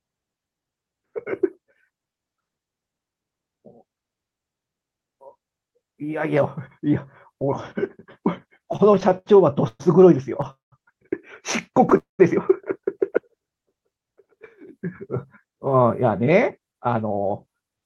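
Speech carried over a call path whose top end stops near 12 kHz, consistent with an Opus super-wideband setting, shows three delivery faults. From 8.57 to 9.81 s there are repeated stalls (stutter): eight separate gaps where the jitter buffer ran dry and the receiver stretched the last sound to cover roughly 280 ms in total, the longest gap 116 ms. About 23% of that stretch is concealment, so the speech drags and stutters, though nothing is actually lost. At 11.97 to 12.21 s a call audio freeze inserts a 217 ms hold. The last sound is carried on and then decays, with about 140 ms of it effectively silent, before the speech resumes where it left off. This is a pause added to the timeline rather than missing audio, and is likely caused by packets held up in transit. From 15.24 s to the end of the clip, a jitter buffer speed-up plays the speech at 108% of normal rate with unchanged pitch. 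The receiver trims short pitch-period slices repeatedly to shed excess buffered delay, removing roughly a fifth of a second, and the delivery sounds hurried.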